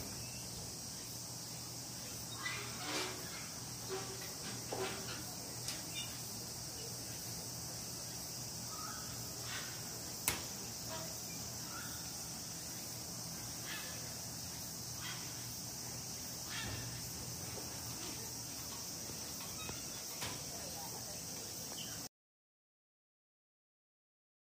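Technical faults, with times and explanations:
22.07 s to the end: audio dropout to silence. The sound cuts off mid-flow and never returns. The final 2.5 s are silence, with no room tone at all. The input was likely lost while the recorder kept writing silence.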